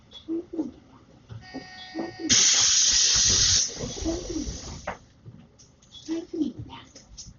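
From start to finish the sound is dull, with nothing above 7 kHz. Rough, fluttering noise clings around tonal parts. This heavy damage is likely Dolby Digital compression at a very low rate, which fits about 32 kbps. Starved frequency lines get filled with noise.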